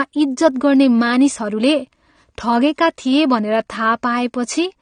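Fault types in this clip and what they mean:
AAC compression: the speech sounds dull and smeared, with a warbly edge on sustained sounds and sibilants, and nothing above 9.7 kHz. That's likely a low-bitrate AAC-LC encode discarding detail it judged inaudible, and the damage fits roughly 32 kbps.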